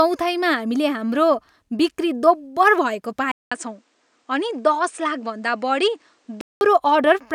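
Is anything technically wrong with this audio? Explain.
Yes. Between 3.32 s and 6.61 s the speech turns duller and boxy, likely because the input switched to a poorer device partway through the recording. The new path passes a narrower band: nothing is present above 9.6 kHz. It also adds a faint background noise of its own, while overall loudness stays about the same. A 200 ms silence marks the changeover. On a spectrogram the top band goes empty across that span, and the waveform shows a flat gap at 3.32 s.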